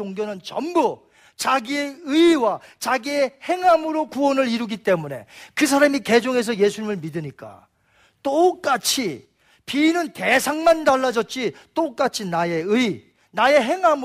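A speech recording with nothing technically wrong with it.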